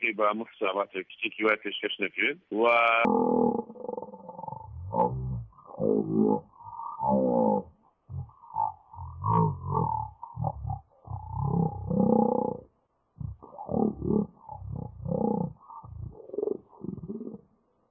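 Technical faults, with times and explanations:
3.05 s to the end, wrong sample rate: from this point the sound drops to a deep, dragging crawl, running at 0.363 times normal speed with everything pitched down by 17.6 semitones, nearly an octave and a half. Speed and pitch fall together by the same ratio because the samples are being read out far slower than they were captured, with no rate conversion, which fits 44.1 kHz material being played back at 16 kHz.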